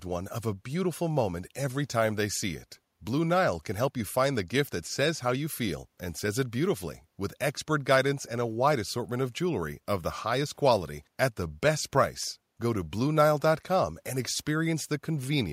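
Nothing goes wrong anywhere in this bit of speech, so there's no technical fault to point to at any moment.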